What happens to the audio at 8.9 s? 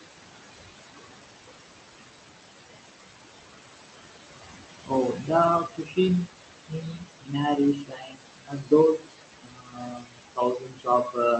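At 8.9 s the speech is being cut by the noise suppressor, from 6.68 s to the end. It mistakes speech energy for noise and pulls it down by up to about 22 dB, so quieter parts sound swallowed and faint. Noise suppressor artifacts are also present throughout: the room noise, only about 7 dB below the speech, is cut by about 19 dB, so it sinks between the words and rises under them.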